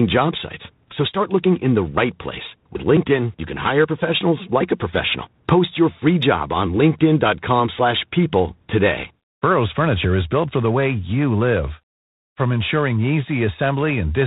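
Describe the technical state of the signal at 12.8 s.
At 12.8 s the speech carries a harsh, rasping hiss that rises and falls with its level, and the sound is confined to the telephone band with nothing above 4 kHz. This is G.726 ADPCM coding, present across the whole clip. Each sample is stored as a few bits of difference from an adaptive prediction, and the coarseness of the damage fits the 24 kbit/s mode, where too few bits leave plainly audible quantisation noise.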